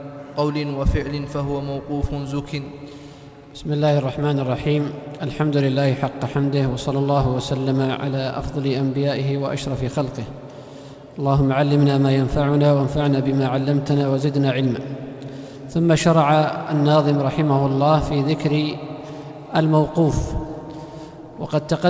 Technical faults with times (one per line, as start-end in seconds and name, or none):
none